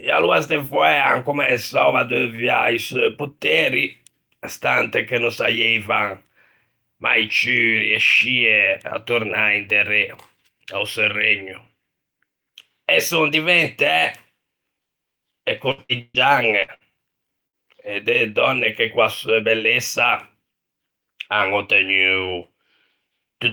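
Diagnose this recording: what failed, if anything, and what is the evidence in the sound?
Network stage, short stall from a late packet: at 2.35 to 2.41 s the jitter buffer ran dry and the last sound was held about 26 ms, visible as a flat, smeared spectrogram band.

Network, repeated packet loss (robotic sound): from 15.71 to 16.92 s, five concealed gaps, the longest 131 ms, drop about 300 ms. The spectrogram shows repeated frozen harmonic stripes, heard as choppy sound with pieces missing.

Network, burst of packet loss: at 17.47 to 17.56 s about 60 ms went missing. The last sound was extended and faded, showing a decaying waveform before an abrupt resumption further on.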